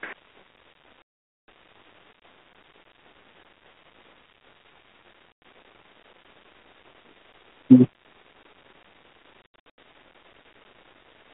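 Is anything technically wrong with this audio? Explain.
Yes. Packet loss on an ADPCM call strikes three times: a 460 ms gap from 1.02 to 1.48 s, a 100 ms gap from 5.32 to 5.42 s, and 260 ms lost in short pieces scattered across 9.42 to 9.78 s, the longest run 80 ms. Missing packets become silence, leaving hard-edged holes in the narrow telephone-band speech, and the G.726 decoder's predictor and step size lose track of the sender's. Speech resumes slightly distorted before settling.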